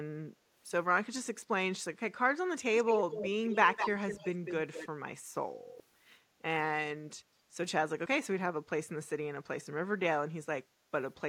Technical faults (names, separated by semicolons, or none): echo leak